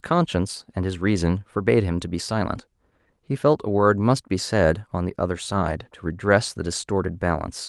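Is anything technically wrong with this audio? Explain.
No, nothing technically wrong can be heard in this speech recording. The audio is continuous and steady throughout.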